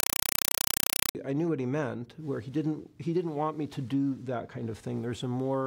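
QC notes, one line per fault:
0.00–1.15 s, compressed stream played as audio: an undecoded AC-3 bitstream went out as plain samples, so 4 ms noise bursts repeating 31.25 times a second chatter as loud static.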